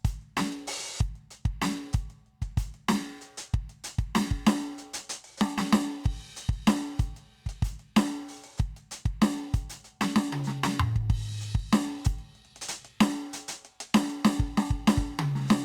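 A short piece of music with nothing technically wrong to point out anywhere along its run, so there's no fault here to place in time or trace to a cause.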